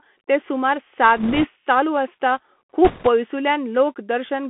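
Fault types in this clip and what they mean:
Bluetooth CVSD headset codec: The whole clip has passed through the narrowband headset codec, which encodes one bit per sample at a 64 kHz rate, each bit stepping the waveform up or down with an adaptive step size. Here the speech is confined to roughly 200 Hz to 3.4 kHz, and the codec damage is plainly audible as a granular hiss beneath the speech, with roughness where fast, loud high-frequency detail outruns the step size.
Bit errors on a Bluetooth voice link: Corrupted bits on the CVSD link cause two bursts of rushing, crackly noise, from 1.17 to 1.48 s between "ते सूमार सात" and "चालू आसता", and from 2.85 to 3.08 s just after "चालू आसता". Because each CVSD bit carries only a small step and the decoder recovers quickly, the errors produce no sharp clicks. The second burst sounds rougher, consistent with an error rate of around 5 percent against about 3 percent in the first.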